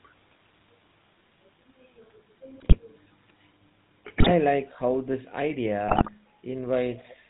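The whole clip carries GSM full-rate codec damage, plainly audible. The sound is buzzy and gravelly, with nothing above 4 kHz. The coder models the vocal tract and drives it with regularly spaced pulses, which fits the 13 kbps full-rate standard.

GSM bit errors strike at 2.6 to 2.83 s, 4.2 to 4.3 s, and 5.88 to 6.11 s. Corrupted filter, pitch and gain values reach the decoder. Each burst squawks, pops and gargles as the spectrum and level lurch.

From 6.93 to 7.14 s, a faint copy of the speech trails behind, 416 ms late and about 25 dB down. This is likely an echo leak. A loudspeaker's sound escaped one side's echo canceller and returned.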